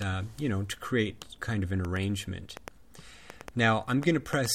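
From 1.85 s to 4.47 s a train of clicks, about ten irregular pops near 3.5 per second, ticks over the sound, likely interference.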